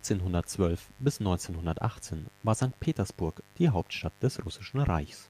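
Throughout the speech runs a mains buzz at 50 Hz, roughly 30 dB down: switching spikes spray harmonics into the kilohertz region, so it rasps rather than hums.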